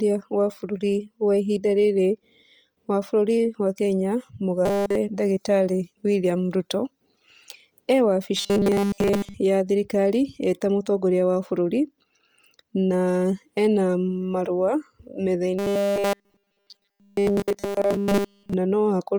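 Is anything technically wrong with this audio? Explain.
Yes. Throughout the 19 s of speech there is a breathy, grainy edge on the voice, with the upper frequencies sounding hissy and smeared rather than crisp. This heavy codec damage is likely Bluetooth LC3 compression, which works in 10 ms frames. At a rate that fits about 32 kbps, it discards much of the upper spectrum and fills the gaps with shaped noise, which produces the granular texture.

In three places the voice turns into a rigid, metallic buzz pitched at 200 Hz: 4.66 to 4.96 s, 8.37 to 9.34 s (ending just before "ya thirikari eta mũtongoria"), and 15.59 to 18.54 s. It still loosely follows the speech's rhythm. This is robotic sound from repeated short buffers, likely caused by new audio arriving too late. The playback loops the last 5 ms chunk, which sets the fixed 200 Hz pitch, and essentially all of the real audio in those spans is replaced.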